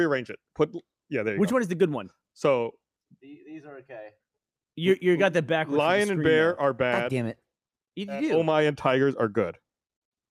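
No faults detected anywhere in the clip.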